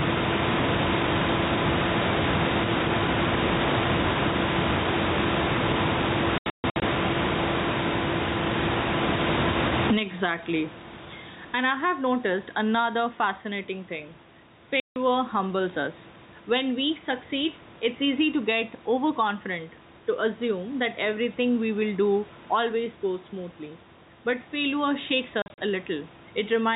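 Speech picked up with the input gain likely set far too high, so a fast limiter or compressor keeps clamping it down, giving gain pumping: the room noise sits about 28 dB under the speech, the gain swings by something like 30 dB, and loud and soft passages are squashed toward one level. Packet loss filled with silence also breaks the audio three times, with the receiver playing dead air in place of the missing packets, so hard-edged holes appear. Between 6.38 and 6.82 s about 300 ms is missing in scattered bursts, the longest 140 ms. From 14.8 to 14.96 s, just before "humbles us", 160 ms is gone. From 25.42 to 25.58 s, just after "failure shakes", 100 ms drops out in short gaps of up to 40 ms. The gap lengths fall in steps that fit 20 ms packets.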